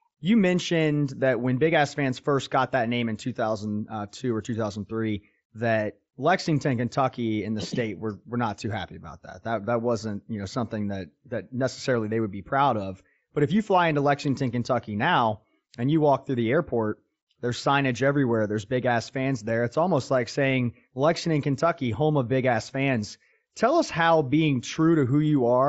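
Speech recording with no technical faults to report.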